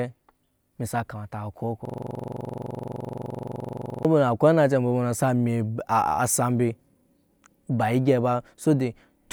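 A system hang loop from 1.85 to 4.05 s in this speech recording repeats one 42.67 ms slice about 50 times, a 23.4 Hz buzzing stutter, consistent with a 2048-sample buffer.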